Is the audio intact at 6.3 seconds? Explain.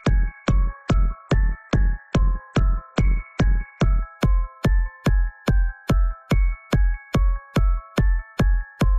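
Yes, at 6.3 seconds the audio is intact, with no dropout, click, distortion or other fault to be heard at that point.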